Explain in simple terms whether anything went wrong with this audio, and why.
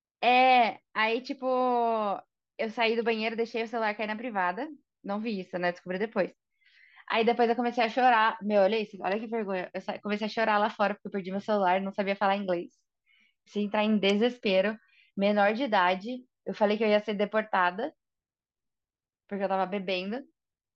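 Nothing went wrong that could be heard: listening to the recording, no problem with the sound stood out at any point.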